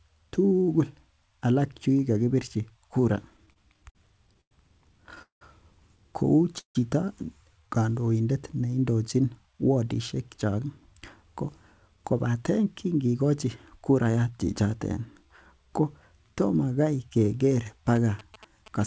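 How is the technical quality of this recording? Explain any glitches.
The recording has several clear network-related glitches: a stuttering patch, two short freezes, three stretches of hurried playback, and a burst of phone interference at the very end. The call path carries the speech through a wideband call codec with nothing above 8 kHz, which fits G.722.

Repeated stalls (stutter), 3.30 to 4.53 s: packets kept arriving late, so the receiver's jitter buffer ran dry ten times in quick succession. Each time, the receiver stretched the last bit of sound to cover the wait, about 250 ms in total, with the longest single gap 100 ms. Nothing is lost, but about a fifth of that span is filler. The speech drags and judders rather than flowing.

Call audio freeze, 5.22 to 5.43 s and 6.59 to 6.77 s: each is likely a packet hold-up that emptied the jitter buffer. The receiver extended the last sound and let it fade, so each freeze has a brief fading tail followed by silence, about 130 ms in the first and 110 ms in the second. 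The speech then resumes where it stopped, now about 189 ms and then 157 ms later than before.

Jitter buffer speed-up, 9.46 to 9.97 s, 10.37 to 11.42 s and 11.88 to 14.32 s: after the delays, the buffer held more audio than it wanted. The receiver drained the excess by repeatedly cutting out tiny pitch-period slices. Playback runs at 108%, 106% and 108% respectively, removing roughly a twentieth of a second, then somewhat more, then about a fifth of a second. The pitch stays the same, but the speech sounds rushed.

GSM signalling bursts, 17.96 s to the end: a nearby 2G phone was exchanging signalling with its network. The audio circuitry rectified those radio bursts into sound. The result is a galloping dit-dit-dit of short buzzes at 217 Hz, sitting about 20 dB below the speech.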